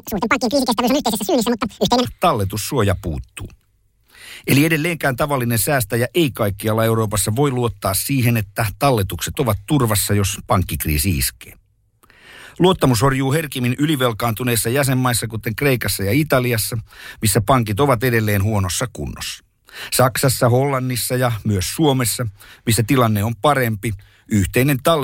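Right from the start, 0 to 2.05 s, the speech comes out at double speed and a full octave up, 12 semitones, the classic audio read two samples at a time fault. The reader treats each pair of samples as one frame.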